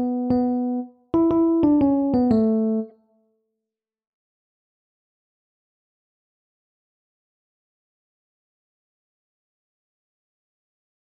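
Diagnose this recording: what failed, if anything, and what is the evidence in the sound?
The codec stage failed: damaged data in a compressed stream produces a brief glitch from 2.89 to 2.92 s. The decoder misread corrupted frames, lost sync and resumed at the next valid header. The waveform shows an abrupt discontinuity.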